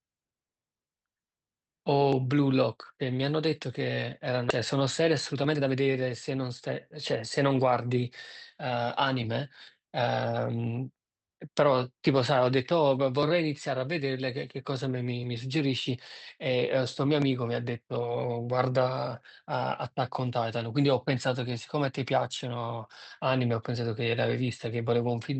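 At 4.49 s there is a skip ahead. About 0.7 s of speech was dropped while later audio waited. Playback jumps straight across the gap, with no silence.

From 4.73 s to 7.52 s comes a jitter buffer speed-up. Short pitch-period pieces were cut repeatedly, about 0.3 s in all. Speech runs at 110% speed, hurried but unchanged in pitch.

Through the Opus call path, the sound stays band-limited to 8 kHz.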